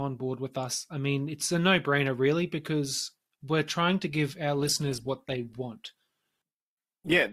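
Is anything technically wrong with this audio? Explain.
Yes. From 4.56 s, just after "trying to give our", an adaptive stream at a lower bitrate takes over, consistent with 64 dropping to 16 kbit/s Opus. Codec artefacts suddenly rise, without any gap.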